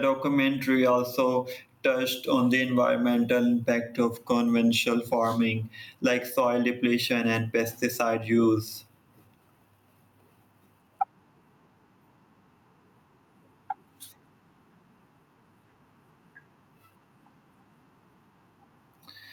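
Speech with gain pumping throughout: the gain swings by about 10 dB, pulling down under loud syllables, likely from excessive input gain hitting a fast limiter.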